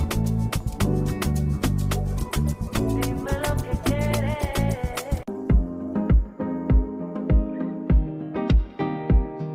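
From 2.1 s to 6.13 s the sound turns coarse, watery and muffled, then clears. This is a call bitrate drop: the encoder was told to spend far fewer bits, with a collapse that fits a fall from roughly 48 kbps to about 17 kbps, held for around 3.9 s.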